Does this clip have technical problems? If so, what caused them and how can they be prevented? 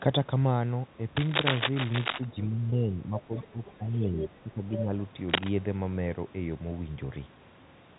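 Yes. Cable scratch noise runs from 1.16 to 2.25 s and again from 5.29 to 5.50 s. Dense, uneven bursts sit at roughly the level of the speech. On a spectrogram they appear as broadband vertical smears, and the waveform shows jagged spikes. The likely cause is a worn cable or connector being moved. Replace or secure the cable.

Speech suppressed in double talk appears at 2.47–2.92 s, 3.08–3.33 s and 3.52–4.63 s. Level drops by around 10 dB. This shows as envelope dips in the waveform. The echo canceller likely attenuated everything while both sides spoke. Use a headset or a better double-talk detector.

Packet loss with pitch repetition occurs at 2.70–2.72 s. About 20 ms is bridged by repeating the last pitch period, which gives a brief buzzy hold. That fits a single lost packet. The spectrogram shows frozen, evenly spaced harmonics, and the waveform shows identical repeated cycles. Improve network stability or add forward error correction.

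Other side's voice leaking through appears at 3.20–3.45 s, 3.65–3.77 s, 4.19–4.29 s and 4.72–4.84 s. These are scraps of a second voice, ranging from about 30 dB to about 5 dB below the speech. The spectrogram shows extra harmonic traces under the main ones. Residual loudspeaker echo likely escaped cancellation. Lower the speaker volume or use headphones.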